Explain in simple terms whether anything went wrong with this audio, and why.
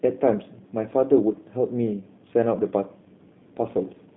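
Throughout, the speech sounds thin, slightly rough and robotic, with nothing above about 3.8 kHz. That is G.729 codec damage: a phone-call format that rebuilds the voice from a simplified model.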